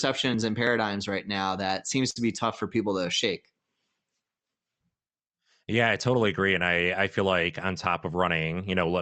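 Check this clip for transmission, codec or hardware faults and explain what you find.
Two transmission faults are audible in this speech, both from the receiver's jitter buffer. The speech passes through the Opus call codec, with content limited to about 8 kHz.

From 2.10 to 2.17 s there is a short stall from a late packet. A packet missed its slot, the jitter buffer emptied, and the receiver stretched the last sound for 55 ms until the packet arrived. Nothing is lost, but the sound is briefly held with a faint buzz or dip, and playback now runs 55 ms later.

From 7.86 to 8.45 s there is a jitter buffer speed-up. Too much audio had queued, so the receiver trimmed pitch-period-sized pieces, about 50 ms in total, to reduce the delay. The speech plays at 108% speed with unchanged pitch and sounds hurried.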